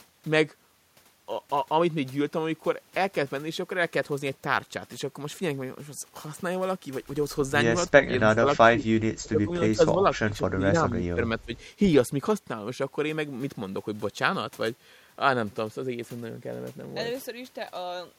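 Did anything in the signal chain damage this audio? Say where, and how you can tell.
Yes, in the call processing. The speech ducks by about 20 dB, chopping in and out, at 7.88–8.45, 8.69–10.75, 10.92–11.21 and 11.39–11.53 s. That's likely speech suppressed in double talk: the echo canceller confused the talker with far-end echo and attenuated both.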